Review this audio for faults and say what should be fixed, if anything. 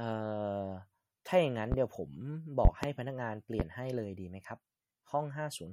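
Plainly audible codec damage runs through the whole clip, with a watery or swirly quality and nothing above 16.5 kHz. That sounds like MP3 compression, likely at a low bitrate around 48 kbps, where the encoder drops weak frequency lines and cuts the treble. Keep a lossless copy, or encode at a much higher bitrate.

There are loud pops at 1.72–1.76 s (one, about 15 dB above the speech), at 2.65–2.87 s (two, about 25 dB) and at 3.60–3.63 s (one, about 20 dB), with the speech carrying on underneath. Each is likely a sudden voltage step added to the signal from a plug, a switch, static or a driver glitch. Secure the cables and switches, ground the gear against static, and check the audio driver before recording again.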